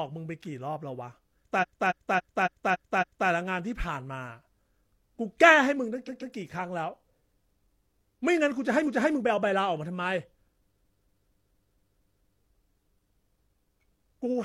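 A speech clip with repeated frames in four places: from 1.58 to 3.25 s a 0.28 s block plays six extra times, at 6.04 to 6.32 s a 0.14 s block plays twice more, at 8.83 to 9.11 s a 0.28 s block plays once more, and from 10.73 to 12.36 s a 0.23 s block plays seven more times. Whole compressed frames were duplicated, adding over 3.8 s in all. Unlike an echo, each repeat is an identical, non-overlapping copy, producing a mechanical stutter.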